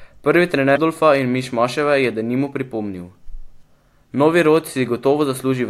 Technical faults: broken MP3 bit reservoir

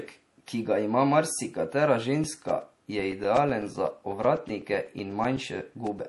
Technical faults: MP3 compression; periodic USB or driver dropouts

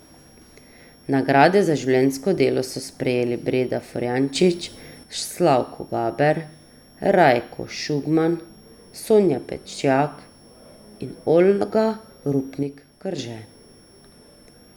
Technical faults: switching supply whistle; sudden gain jump

